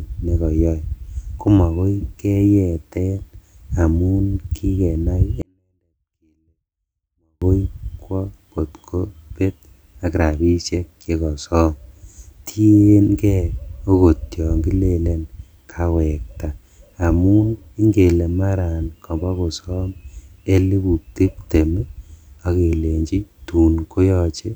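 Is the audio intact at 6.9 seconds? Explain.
No. From 5.42 to 7.42 s, just after "amun kikenai", a 24-bit alignment error reads low-byte 24-bit samples as 32-bit values, leaving the speech clean but about 48 dB quieter, almost inaudible.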